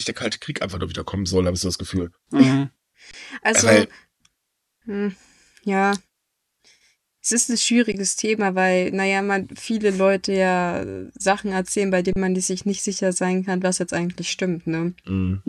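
Underruns with held sample at 3.11 s (23 ms, fitting a 1024-sample buffer), 7.92 s after "ist ein", and 12.13 s between "erzählen bei" and "man sich nicht sicher" (34 ms). The converter freezes its last value, then the speech resumes without loss, with soft edges.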